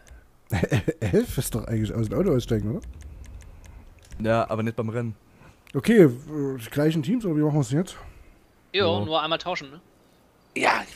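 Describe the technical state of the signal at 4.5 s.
At 4.5 s the signal is intact, with no dropout, distortion, glitch or other audible fault at that point.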